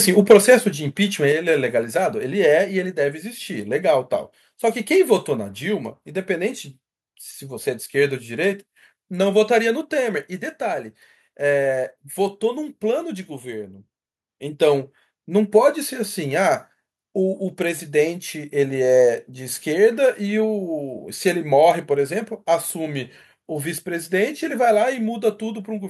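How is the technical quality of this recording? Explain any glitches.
The recording has a few level problems.

Right at the start, from 0.3 to 0.54 s, there's microphone overload. The input was likely set too hot, driving peaks about 5 dB past the converter's ceiling, so a small share of samples get flattened and the loudest moment picks up a harsh, crackly edge.

Microphone volume stepped down three times: at 0.32 s by about 4 dB, at 1.32 s by about 5 dB, and at 5.4 s by about 2 dB. This is likely the call software reacting to that hot input and pulling the device gain down. Each step drops voice and background together in one abrupt notch.

At 14.28 s the microphone volume steps up by about 3 dB. The software decided the level had become too quiet and raised the input gain in one jump, so the voice and room noise get louder together mid-stream.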